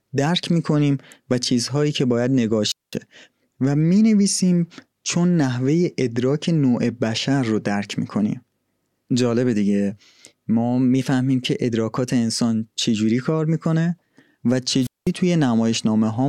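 At 2.67 s the speech hits a wireless microphone squelch dropout. The radio signal from the transmitter fades, hiss swells briefly, and the receiver's squelch cuts the output to near silence for about 0.21 s before the voice returns at 2.96 s. It happens again from 14.81 s to 15.11 s, with a mute of about 0.20 s. That short rush of static and then a hole is the RF link fading out for a moment.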